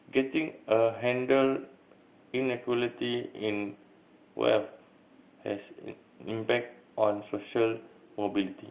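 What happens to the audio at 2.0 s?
Nothing goes wrong at 2.0 s: the speech continues intact through that moment, carried by ordinary A-law telephone coding with its usual narrow band below 4 kHz.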